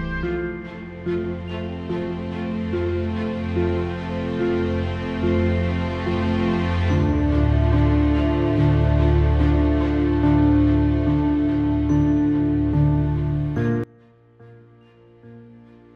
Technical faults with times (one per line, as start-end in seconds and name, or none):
13.84-15.95 one channel inverted